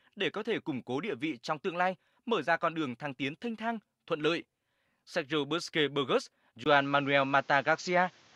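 An input switched to a poorer device at 6.64 s and stays that way until the end at 8.35 s. A brief gap of about 20 ms marks the switch. After it, nothing reaches above 7.4 kHz, so the sound turns duller and boxier, and a faint new background noise appears roughly 35 dB below the signal, though the overall level barely changes. The likely cause is the recording input changing mid-stream to a narrower-band microphone or headset.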